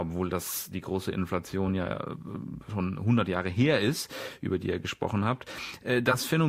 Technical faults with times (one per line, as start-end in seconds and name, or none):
6.11-6.16 repeated frames